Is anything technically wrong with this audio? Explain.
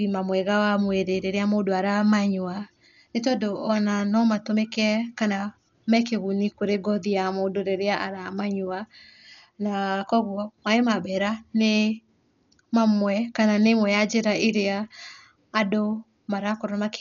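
Yes. Throughout the speech, everything above 6.9 kHz is missing, and the sound is dull and heavily coded, most likely from Dolby Digital compression at a bitrate around 48 kbps. Starved of bits, the encoder narrows the band and leaves many frequency lines without mantissa data, which the decoder fills with dither noise. That fill is what sets it apart from a simple low-pass filter: instead of clean dullness, a rough, fluttering noise clings to the tonal parts.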